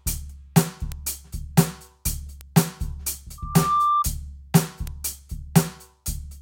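A sharp, isolated tick cuts through the music at 0.92 s, about -8 dBFS, and another, quieter one at 2.41 s, about -14 dBFS. Each is a bit error spike: one flipped bit throws a single sample far off its value and straight back.

From 3.38 s to 4.05 s a 1.2 kHz tone swells out of the music, building over roughly 0.4 s until it sits a few dB above it. This is loudspeaker feedback squeal, where the microphone re-captures its own loudspeaker and the loop gain at that frequency exceeds one.

A final one-sample bit error spike ticks at 4.87 s, again about -8 dBFS.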